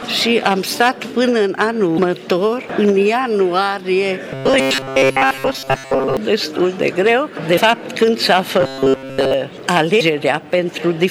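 At 1.95 to 1.99 s, and again at 4.56 to 4.60 s, 7.54 to 7.58 s and 9.97 to 10.01 s, damaged data in the compressed stream makes the decoder misread frames and lose sync, giving brief glitches. Each shows as a short broadband smear or blocky patch on a spectrogram. From 4.34 to 6.17 s and 8.61 to 9.34 s, robotic sound likely comes from repeated short buffers of about 7.5 ms filling most of the time. This produces a metallic 134 Hz buzz, visible as evenly spaced harmonic stripes and a waveform that repeats cycle after cycle.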